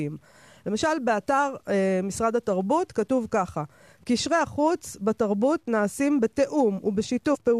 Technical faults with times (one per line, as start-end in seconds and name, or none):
0.00-7.59 low bit depth without dither
7.34-7.36 damaged data in a compressed stream